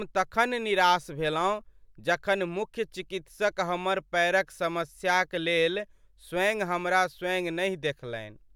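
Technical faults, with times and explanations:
Nothing wrong turns up anywhere in this speech recording, so there's no fault to list.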